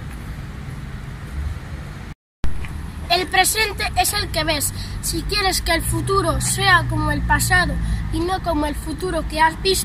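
No technical faults are audible in this audio.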